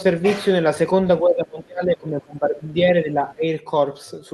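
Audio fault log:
1.21–2.75 s and 3.02–3.44 s, speech suppressed in double talk: speech dips up to about 25 dB, then 15 dB, likely from an echo canceller clamping down during overlapping talk.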